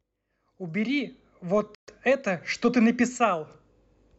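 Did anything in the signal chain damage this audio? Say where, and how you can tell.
Yes. A Bluetooth stall at 1.75 to 1.88 s cuts the speech to about 130 ms of dead silence, after which the sound resumes where it broke off rather than being smeared or muffled. That points to the wireless link and the receiver's playback buffer rather than the codec itself. Radio interference likely delayed packets long enough for the headphones' buffer to empty, so output simply halted until the retransmitted audio arrived.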